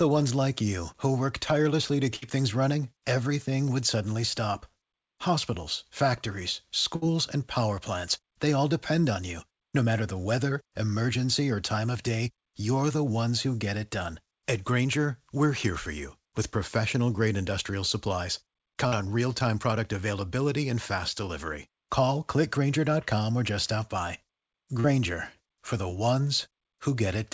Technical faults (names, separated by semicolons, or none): burst of packet loss; short concealed packet loss